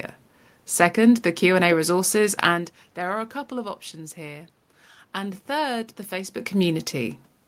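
No technical faults can be heard anywhere in the recording. A background noise from the room is part of the capture, and the speaker's level shifts around 2.5 s and again around 6 s, as when someone leans away from or toward the microphone.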